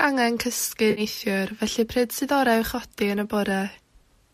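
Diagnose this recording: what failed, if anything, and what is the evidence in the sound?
The failure is in the codec and network stage: AAC frame loss with concealment. From 0.91 to 1.01 s the speech turns into a brief smeared, noisy, phasey patch about 60 ms long, which fits roughly six lost 10 ms frames. The decoder bridged the gap by reusing the last good spectrum with randomised signs or interpolated energy. The gap was too short for the fill to fade toward silence. The slight graininess throughout is likely from light low-delay AAC coding.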